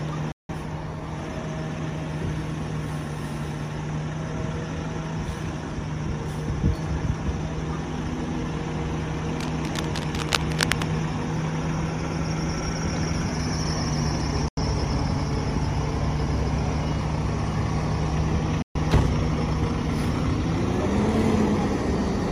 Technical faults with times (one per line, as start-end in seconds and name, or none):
0.32-0.53 digital broadcast dropout
9.33-10.85 cable scratch noise
14.48-14.61 digital broadcast dropout
18.62-18.79 digital broadcast dropout